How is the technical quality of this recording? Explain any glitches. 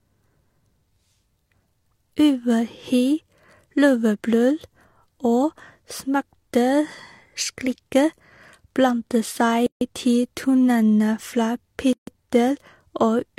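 Two glitches break the speech: gaps at a join of encoded pieces at 9.66–9.81 s, before "til tonene fra", and 11.93–12.07 s, after "seg til tonene fra". Separately encoded segments keep their encoder delay and end padding, leaving about 148 ms and 145 ms of silence. These show as blank vertical strips with sharp, slightly smeared edges.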